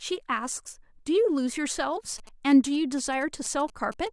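A nearby 2G phone's signalling transmissions are being rectified by the audio circuit in this speech clip, producing GSM signalling bursts from 2.18 to 4.08 s: galloping ticks and short 217 Hz buzzes roughly 25 dB below the speech.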